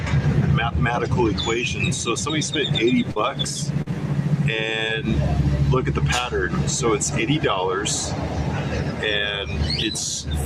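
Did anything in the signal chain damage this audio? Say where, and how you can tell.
Yes. There is short concealed packet loss, a network-stage fault, at 3.11–3.18 s and 3.82–3.88 s. Each time, about 40 ms of audio missed the decoder, and the receiver's concealment carried the preceding sound forward for 44 ms before blending back. It is heard as a brief smear.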